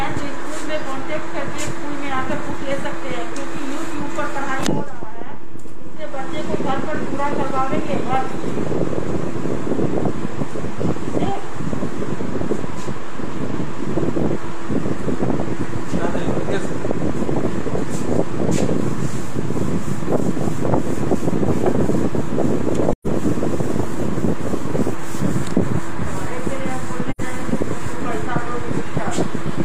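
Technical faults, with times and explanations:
Throughout: DC offset. The whole waveform sits shifted away from zero by a constant amount. This cannot be heard as a sound. It wastes headroom, so peaks clip sooner on one side. It also appears as steady energy at the very bottom of the spectrum.
22.92 to 23.07 s and 27.10 to 27.21 s: AAC frame loss with muting. Compressed frames went missing and the decoder filled them with silence. The gaps last about 128 ms and 85 ms, which fits roughly three and two lost frames. Overlapping windows fade the sound out and back in, so each hole has soft edges.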